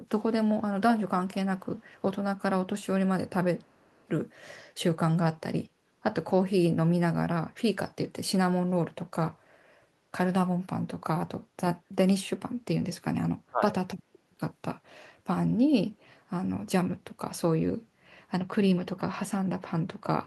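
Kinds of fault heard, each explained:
Echo leak: a faint copy of the speech, about 35 dB below it and trailing by 390 ms, appears at 1.58 to 2.03 s and 3.58 to 4.07 s. It is likely loudspeaker pickup the far-end echo canceller missed. The fixed lag distinguishes it from room reverberation.
Speech suppressed in double talk: at 13.48 to 13.76 s the speech dips by about 25 dB for roughly 300 ms. This is likely the echo canceller turning everything down while both sides talked at once. The speech is pushed down rather than fully silenced as in a dropout.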